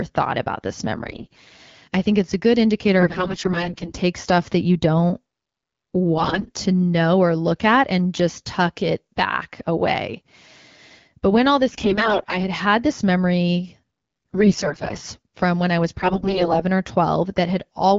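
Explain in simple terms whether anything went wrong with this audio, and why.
AMR bit errors struck six times, at 0.96–1.52 s, 2.99–4.01 s, 6.17–6.51 s, 11.71–12.38 s, 14.33–15.00 s and 15.99–16.64 s. A weak link flipped many of the less protected bits in the compressed speech, while the core data still passed its check, so the phone decoded the damaged parts as if they were fine. The speech keeps its pitch and loudness there but turns hoarse, scratchy and gargly, worst at 2.99, 11.71 and 15.99 s.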